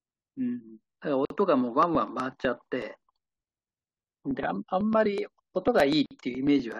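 At 1.25 s a 51 ms silence opens in the speech, a gap at a join of encoded pieces: encoder delay and end padding were left in, and the speech resumes exactly where it stopped.

From 1.83 s to 6.72 s, periodic USB or driver dropouts skip about a millisecond every 0.124 s. Unlike a lone join gap, these form a steady train of roughly forty ticks.

At 6.06 s a second, 50 ms join gap appears, again a single silence rather than part of the regular pattern.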